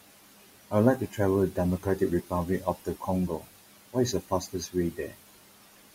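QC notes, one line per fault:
Throughout: noise suppressor artifacts. The room noise, about 15 dB under the speech, is pulled down by about 17 dB in the gaps and comes back under each phrase, so the residue pumps.
1.00–1.18, 1.79–2.01, 2.60–3.08, 3.28–3.59, 4.12–4.75 and 4.91–5.21 s: speech cut by the noise suppressor. Quiet parts of the speech were taken for noise and turned down by about 12 to 18 dB, for roughly a tenth to a third of a second each time, so they sound swallowed. These are short holes in the speech, not pumping in the background.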